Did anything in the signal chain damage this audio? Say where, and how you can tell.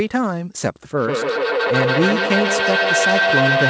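Yes. A feedback echo between two devices starts at 0.97 s and runs to the end: each syllable returns roughly every 150 ms, thinner and more ringing each pass. The repeats build up rather than fade, peaking about 2 dB above the direct speech. A second device on the call is replaying this microphone's signal into the same room. The local echo canceller can't remove sound it didn't play itself, so the loop keeps circulating. On a spectrogram, each speech band is trailed by evenly spaced copies that keep their energy below the 8 kHz ceiling. The waveform's envelope swells instead of decaying.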